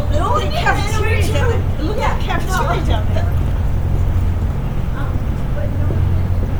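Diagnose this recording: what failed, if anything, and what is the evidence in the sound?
Across the whole recording the upper detail has a plainly audible grainy, breathy texture, even though the band extends to 20.2 kHz. At the codec stage this is likely Bluetooth LC3 compression, whose 10 ms transform frames, at a rate pointing to around 48 kbps, replace discarded high-frequency content with filled noise.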